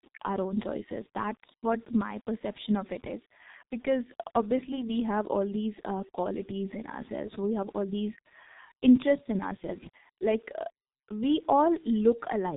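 Throughout the speech, the G.723.1 codec has left heavy damage. The sound is band-limited, with nothing above about 3.8 kHz. That removes the air and sharpness from sibilants and fricatives. The codec squeezes the signal to roughly 6.3 kbit/s. It models the voice in 30 ms frames and updates that model slowly. So the speech sounds muffled and hoarse. Consonants blur into their neighbours, and quick changes are smeared.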